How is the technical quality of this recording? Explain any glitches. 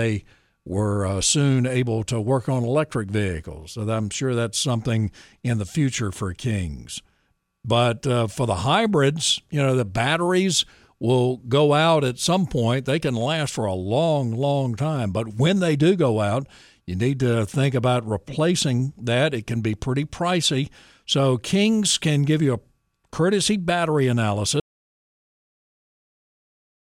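The speech is interrupted near the end by an audio dropout to silence. At 24.6 s, right after "you a courtesy battery", the sound cuts off mid-flow and stays silent through the end of the clip. The input was likely lost, for example through a disconnect, link failure or mute, while recording continued. On a waveform this appears as a flat line, and on a spectrogram as a completely blank band with no room tone.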